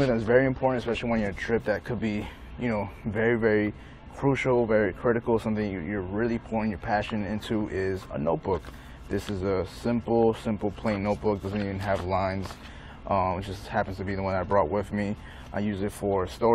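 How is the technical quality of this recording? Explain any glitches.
Nothing here stands out as a glitch; the recording runs steadily all the way, with no dropouts, clicks or other technical hiccups to point to.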